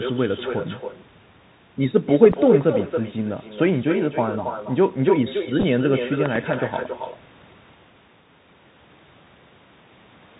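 From start to finish the speech is shadowed by a quieter, thinner copy about a third of a second behind, at about 6 dB below the voice. This is echo with no canceller: a far-end loudspeaker feeds its microphone and nothing removes the returning sound.

Running under all of it is a granular hiss, with scratchy sibilants and a muffled top where nothing passes above 4 kHz. This is the Bluetooth CVSD headset codec, which fits a 64 kbit/s link. Its one-bit up-or-down steps cannot keep pace with loud high sounds, so the codec damage is plainly audible. The call microphone's own high-pass is part of the chain as well.

At 2.33 to 2.35 s a single sharp loud pop lands roughly 10 dB above the signal while the speech carries on underneath, likely a voltage spike from a plug, switch, static discharge or driver glitch.

From 5.60 to 5.64 s a short buzzy patch appears. This is a Bluetooth headset packet repeated: about 18.8 ms of audio went missing across 37.5 ms, which fits five lost packets, with the longest run around 10 ms. 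The chip replayed the previous packet each time.

Between 6.26 and 6.38 s two loud pops in quick succession jump around 15 dB above the signal. They are likely a pair of electrical transients added on top of the audio.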